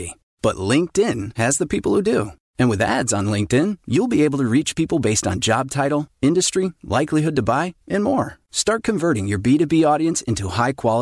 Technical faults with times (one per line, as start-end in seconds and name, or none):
none